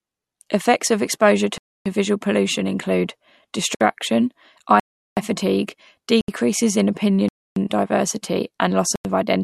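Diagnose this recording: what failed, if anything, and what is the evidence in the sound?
Driver or buffer stage: blocks of digital silence at 1.58–1.86, 3.75–3.81, 4.80–5.17, 6.21–6.28, 7.29–7.56 and 8.96–9.05 s. Each cuts the sound out and back without fade, leaving holes of 60 to 370 ms. The output buffer was either not filled in time or given invalid values.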